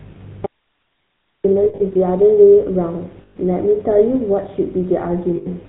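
The speech runs through the GSM full-rate codec at 13 kbps for its whole length, and the damage is plainly audible. The codec rebuilds the voice from a vocal-tract model driven by a sparse pulse excitation, which gives it a buzzy, gravelly roughness, with nothing above 4 kHz.

From 0.46 s to 1.44 s the audio drops out to a faint residue: the signal cuts off abruptly for about 0.98 s, leaving only hiss about 55 dB below the speech level. The likely cause is the wanted signal being lost while the path after the break stayed live.

Lost GSM frames follow at 1.64 to 1.81 s, where 120 ms of loss is scattered over 160 ms with the longest run around 70 ms. They occur again at 3.22 to 3.37 s, 140 ms, and at 5.36 to 5.48 s, 100 ms. In each case the decoder repeats the last good frame's settings, so the sound hangs as a rough, metallic ring instead of breaking off cleanly.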